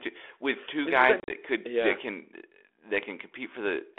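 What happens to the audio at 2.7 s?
Nothing goes wrong at 2.7 s: the speech continues intact through that moment, still carried in the narrow telephone band of the 32 kbit/s G.726 link.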